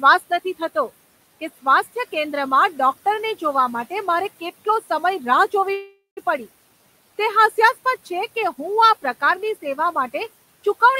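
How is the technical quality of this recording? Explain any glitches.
The recording has one glitch, a call audio freeze, against room noise sitting about 22 dB below the speech. From 5.73 to 6.19 s, packets were likely held up in transit and the jitter buffer ran dry. The receiver stretched the last sound into a fading buzz or hiss lasting about 0.44 s, including roughly 150 ms of silence. The speech then resumes intact, but about 435 ms later than it should.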